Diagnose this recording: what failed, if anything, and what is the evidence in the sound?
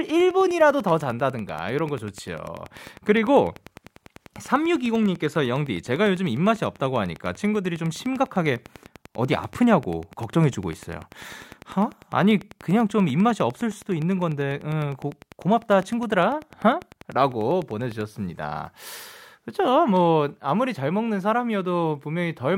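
Interference, likely from nearby equipment on the analogue wiring, adds a train of clicks: ten regular ticks per second from 0.1 to 18.0 s, about 5 dB above the speech.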